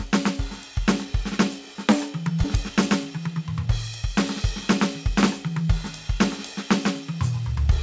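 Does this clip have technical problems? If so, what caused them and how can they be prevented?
Yes. At about 2.44 s the music makes a skip ahead: roughly 0.7 s of audio is gone and playback joins the two sides almost directly, with no silence or filler between them. That points to a jitter buffer that had overflowed and discarded queued audio to catch up. Unlike a dropout, there is no gap or concealment, just an abrupt jump in the music. A larger or adaptive jitter buffer that drains gradually instead of discarding would prevent it.

From 3.10 to 4.03 s a jitter buffer speed-up follows. The receiver cut short pitch-period pieces many times over, removing roughly 70 ms in total, so the music runs at about 107% speed for that stretch and the tempo visibly rushes while the pitch stays the same. That steady pitch separates it from a clock or resampling error, which would shift pitch along with speed. 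Smoother network delivery, avoiding bursts of late packets, would prevent it. Throughout, the G.722 call path limits the audio to nothing above 8 kHz.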